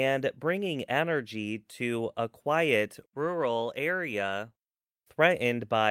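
No technical faults are audible.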